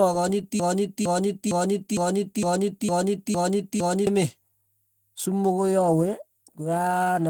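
Opus voice compression runs through the whole speech clip, and its damage is plainly audible. The sound fits a low bitrate of around 16 kbps in hybrid mode, with linear-prediction coding below 8 kHz and a transform layer above it. The coarsely coded excitation gives the speech a hoarse, slightly robotic texture.

From 0.60 to 4.07 s a broken-record loop takes over. A 458 ms fragment repeats exactly, back to back, eight times, and the audio that should have played during those seconds is gone. The likely cause is a stalled player or stream resending its last buffered fragment.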